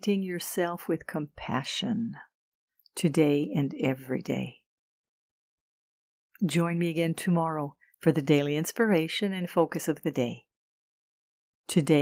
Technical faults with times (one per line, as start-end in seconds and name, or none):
none